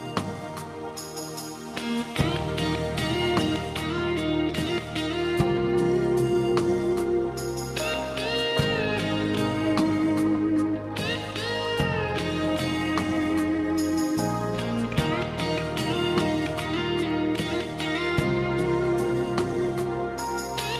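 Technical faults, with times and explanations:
No technical faults detected anywhere in the recording.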